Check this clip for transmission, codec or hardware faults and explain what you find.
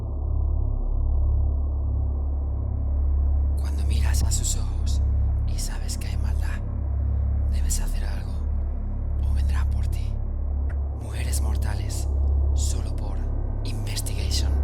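Three short noise blips, at 4.21–4.24 s, 10.70–10.74 s and a fainter 12.81–12.83 s, are corrupt frame decoded: bit-damaged compressed frames played anyway, misplacing energy across frequency.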